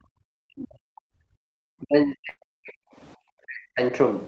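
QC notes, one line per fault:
0.00–0.10 s, background gated by the echo canceller: at the very start the room sound drops by about 31 dB for roughly a tenth of a second, then comes back. The echo canceller clamped the microphone while the far end's loudspeaker was active. Only the background ducks, with no talker in it. The double-talk cuts below hit the speech itself.
0.38–1.29 s, 1.79–2.99 s and 3.42–3.81 s, speech suppressed in double talk: in these three stretches the talker's level collapses, at worst by something like 40 dB. The likely cause is the echo canceller meeting both sides talking at once and turning everything down because it cannot tell the near talker from the echo. The time line runs on without a jump.
2.29–2.39 s, burst of packet loss: inside the second suppressed stretch, about 80 ms of audio is missing. The receiver filled roughly 76 ms by stretching the last sound and fading it, which gives a brief held buzz or sinking hiss. 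The sound then resumes further along. That skip in time, with material gone, separates it from the suppression around it, which only lowers the level.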